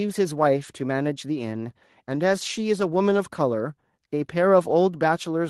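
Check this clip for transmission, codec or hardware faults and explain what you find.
No fault turns up anywhere in this speech recording. There is nothing here that needs explaining.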